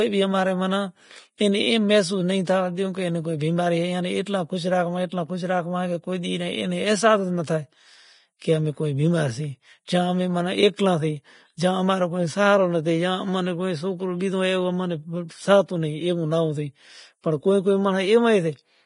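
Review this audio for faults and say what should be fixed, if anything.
Throughout, the speech has nothing above 10.6 kHz, and its treble sounds hissy and grainy. This is likely heavy Vorbis compression; a plain low-pass would sound dull, not grainy. Prevent it by encoding well above the roughly 30 kbps this suggests.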